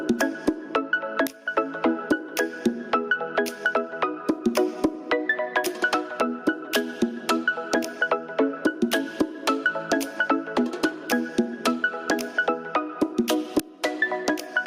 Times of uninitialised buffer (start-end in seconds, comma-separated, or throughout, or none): 1.27, 13.59